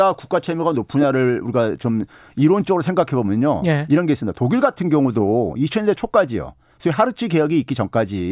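No technical faults can be heard anywhere in the recording. Nothing in the speech calls for a timestamp or a technical explanation.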